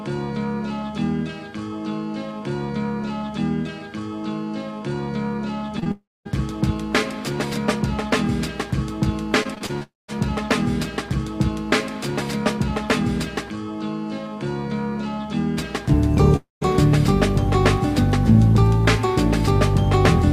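At 5.79 s and again at 5.84 s come two short concealed packet losses, each about 20 ms of missing audio. The receiver bridged each gap by extending the preceding sound, which leaves a quick smear or wobble rather than an audible hole.

From 5.91 to 6.27 s there is a long network dropout, most likely a stall in delivery on the network path. The last sound is stretched into a fading buzz or hiss, then roughly 0.23 s of near-silence follows before the audio resumes with that section gone.

Between 9.43 and 9.83 s, repeated packet loss produces a robotic sound. There are five separate gaps, the longest 27 ms, and concealment fills about a quarter of the span. The patches follow each other so closely that the audio turns choppy.

That stretch runs straight into another long network dropout from 9.83 to 10.10 s, likely the same delivery stall continuing. The concealment tail fades and leaves about 0.19 s of near-silence.

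A third long network dropout sits at 16.36 to 16.63 s, again most likely packets that never arrived. It has the same fading fill, followed by about 0.17 s of near-silence and a resumption that skips the lost material.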